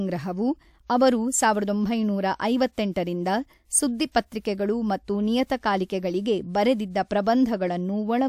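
A transform codec spread quantisation noise across whole blocks, so noise sized for sharp speech onsets leaked into the quiet just before them. The result is pre-echo: a short hiss smearing ahead of the attack at 2.73 to 2.78 s (52 ms) and 4.11 to 4.15 s (35 ms).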